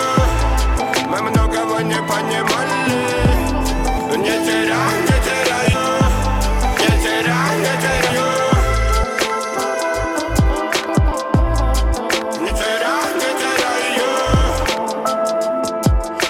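Compressed frames are skipped at 3.97–4.00, 5.73–5.76, 6.81–6.85, 8.09, 9.03–9.07, 11.11, 12.49 and 14.65–14.68 s, with jumps of roughly 70 ms to four tenths of a second, fitting 20 ms frames. Each join is a brief blip or click, with a spectrogram seam and waveform discontinuity.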